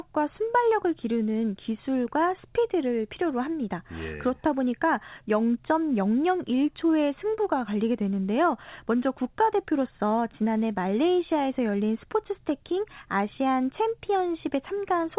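No technical faults are audible.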